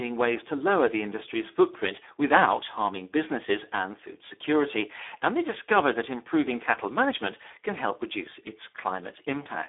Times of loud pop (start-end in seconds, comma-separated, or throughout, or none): none